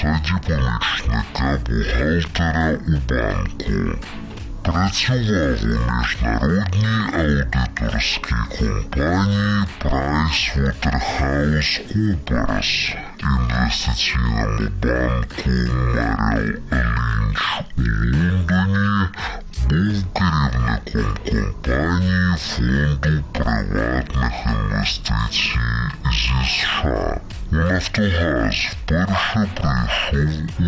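Throughout, the audio has a wrong sample rate. It plays at half speed and a full octave low, which fits 32 kHz material played at 16 kHz.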